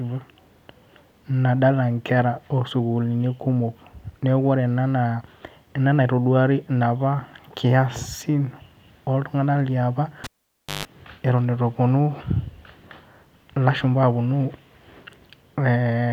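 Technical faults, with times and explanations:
10.24 to 10.85 s, cable pulled and plugged in: A pop cuts off the speech, then near silence follows for 0.56 s. On reinsertion, about 0.14 s of 50 Hz mains buzz leaks in while only the tip touches. A second pop restores the speech.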